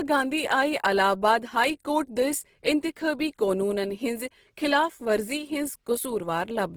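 A speech clip with plainly audible codec damage from start to finish. The sound is rough, grainy and noisy rather than swirly. Content still reaches about 20.3 kHz. The likely cause is Opus compression in its music mode, at a rate that fits about 16 kbps.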